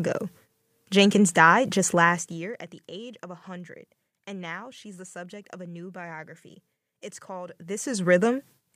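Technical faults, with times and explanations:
1.95–2.69 s, zipper noise: the level drops about 20 dB in 1 dB steps, roughly twenty a second. Each unsmoothed jump clicks, giving a fast ticking.
7.48–8.13 s, zipper noise: the level climbs back about 20 dB the same way. Its 1 dB steps at roughly twenty a second make a zipping rasp.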